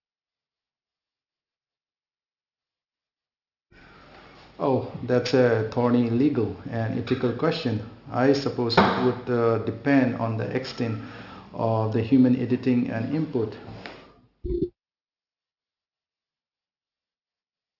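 From start to finish the speech has a gritty, metallic edge. Sibilants sound brittle, and the spectrum runs hard up to a wall at 6 kHz. This is aliasing. The sample rate was cut, which fits a drop from 44.1 kHz to 12 kHz, without first filtering out content above the new 6 kHz limit. That energy folded back below 6 kHz as false, unrelated tones, sitting roughly 25 dB under the speech.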